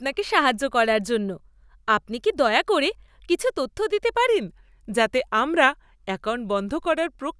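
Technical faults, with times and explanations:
4.27–7.40 s, wrong sample rate: after "করে কিছু তথ্য দিতে" the speech slows to about 0.92 times its speed and drops about 1.5 semitones, sounding lower, heavier and more drawn out. Samples are being played slower than they were captured, which fits 24 kHz material played at 22 kHz with no conversion. On a spectrogram, harmonics and formants slide down about 8% and each feature stretches in time. In the waveform, pitch periods lengthen and the envelope slows.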